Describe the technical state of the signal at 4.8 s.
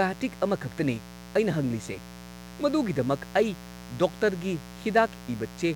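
At 4.8 s, as throughout, a 60 Hz mains buzz of sharp spikes repeating 120 times per second sits around 20 dB under the speech, raspy and reaching kilohertz harmonics rather than a smooth low hum.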